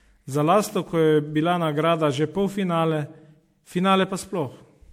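It's a short speech recording with generation loss all the way through: a swirly, hollow smear with soft, blurred attacks and nothing above 17.7 kHz. That likely comes from roughly ten rounds of MP3 re-encoding, and it fits a chain around 96 kbit/s.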